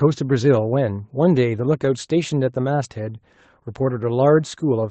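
Speech, with no technical faults; the high end stops near 8 kHz, as expected from a call path running Opus at around 24 kbps.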